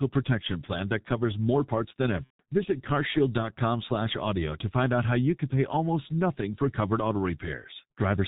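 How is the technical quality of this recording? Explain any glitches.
The technical quality is poor. The whole recording is heavily coloured by a low-rate codec, and one dropout occurs early on.

Throughout, the speech carries G.723.1 codec damage. Nothing above 4 kHz survives, so the voice is muffled. The slow-updating voice model leaves it hoarse, with smeared consonants. The heavy degradation fits a 6.3 kbit/s setting.

From 2.24 to 2.42 s, just after "covers more parts than", there is VoIP packet loss concealed by the speech codec. About 150 ms went missing, which points to five lost frames. The decoder repeated its last pitch and filter while fading the gain. That leaves a fading smear, muted from the third lost frame, that stays weak briefly afterwards.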